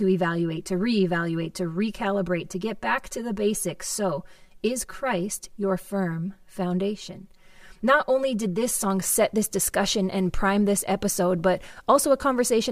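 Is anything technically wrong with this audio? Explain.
Yes. From 0.0 to 8.90 s, channel delay causes comb filtering. One side lags by roughly 5 ms, so summing to mono cuts evenly spaced notches from around 100 Hz up, and the speech sounds hollow and phasey.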